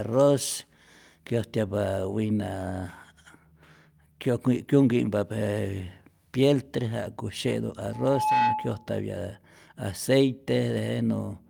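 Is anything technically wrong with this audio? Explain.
Yes. From 7.93 to 8.91 s a piercing 861 Hz squeal swells within half a second to a few dB above the speech: loudspeaker feedback, where the microphone re-amplifies its own loudspeaker.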